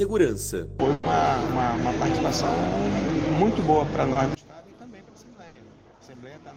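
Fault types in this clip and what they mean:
Mains hum: A steady 50 Hz drone, the kind a ground loop or nearby transformer puts into the signal. It runs under the whole clip, fairly strong and not far below the sound itself, with some low harmonics adding to its buzz.
Burst of packet loss: Two spots where a run of audio never arrived in time. Around 0.93 to 1.05 s, about 100 ms was filled by stretching the last sound and fading it. Around 5.47 to 5.57 s, about 80 ms was filled the same way. In both, the real audio is simply gone.
Short concealed packet loss: A much smaller hole at 4.13 to 4.17 s, about 20 ms patched by continuing the previous sound and blending back. It comes across as a quick smear or wobble rather than an obvious gap.
One channel inverted: From 4.35 s to the end, the level suddenly drops by about 23 dB and what remains is a faint copy. That's likely one stereo channel flipped in polarity, so the shared centre content cancels when both channels are summed to mono.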